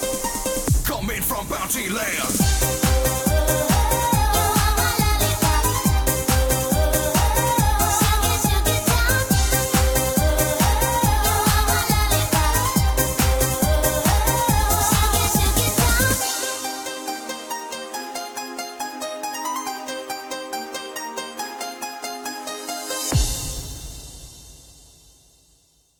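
No technical faults can be heard anywhere in the recording. Nothing breaks up, drops out or shifts at any point.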